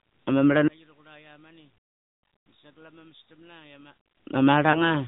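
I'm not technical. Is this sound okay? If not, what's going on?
No. The whole clip has been through the AMR narrowband mobile codec, the old phone-network speech system. It throws away everything above 4 kHz, so speech sounds muffled and boxy, with a buzzy, synthetic edge. Unlike a plain low-quality recording, the roughness comes from the voice being rebuilt by a model.

From about 0.68 to 4.06 seconds the speech drops sharply, leaving a faint trace. The likely cause is one channel inverted: one side of the stereo signal is flipped, so the two sides cancel when combined. Unlike a volume fade, it sounds emptied out rather than smoothly quieter.

Between about 4.72 and 4.91 seconds there is a brief dip or warble. This is a lost AMR speech frame: one 20 ms piece of the call was damaged in transmission, and the phone patched the gap by guessing from the sound just before. Unlike a dropout into silence, it falters briefly and then recovers.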